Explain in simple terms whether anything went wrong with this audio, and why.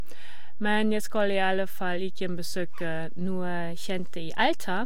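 Two things went wrong. Throughout the recording, the whole waveform sits shifted away from its zero line by a constant amount, a fault called DC offset. You cannot hear it directly, but it uses up loudness headroom and leaves steady energy at the very lowest frequencies.

At 3.25 s there is a drift correction step: software keeping two clocks in line likely changed the playback rate in one jump. From there to the end at 4.86 s the speech runs about 5.9% faster and sounds nearly a semitone higher, roughly 99 cents.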